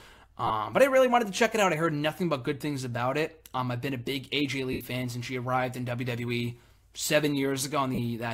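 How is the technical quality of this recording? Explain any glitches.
There are three short dropouts, all the same kind of fault: lost LE Audio frames. They sit at 0.47 s and 7.95 s, each lasting about 30 ms, plus a longer one at 4.72 s of about 80 ms. When Bluetooth frames go missing, the LC3 decoder fills the gap by replaying the last spectrum with scrambled phase, then fading it out. Any tonal content turns into a brief noisy smear, and the longer gap around 4.72 s sags audibly toward quiet before the sound resumes.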